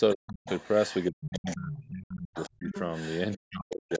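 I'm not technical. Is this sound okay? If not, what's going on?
No. Two call problems recur through the clip.

Other side's voice leaking through: a second, quieter voice sits under the talker, briefly at 0.1 s, then from 0.46 to 1.88 s, 2.34 to 3.36 s and 3.71 to 3.98 s. The likely cause is the talker's loudspeaker sound reaching their microphone without being fully cancelled.

Speech suppressed in double talk: the talker's voice sinks to near silence from 0.15 to 0.46 s, 1.11 to 2.72 s, and 3.36 s to the end. This happens while the other side is also talking, likely because the echo canceller turned everything down when both spoke at once.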